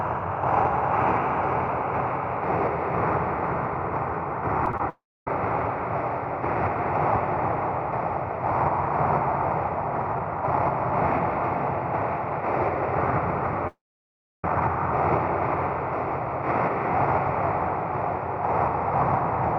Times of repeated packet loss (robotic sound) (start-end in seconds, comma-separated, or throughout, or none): 4.66-4.80